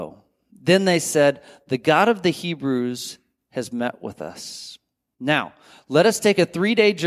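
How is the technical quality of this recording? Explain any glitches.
Listening through the recording, nothing stood out as a glitch or technical problem.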